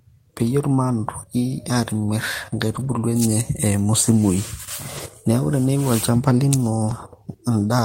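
Lost packets rebuilt from error correction occur at 2.75–2.97 s, 4.97–4.99 s and 6.89 s. Low-bitrate copies replaced the missing audio, so the waveform shows no gap, but the speech turns rough and noisy, with a grainier, smeared spectrogram texture.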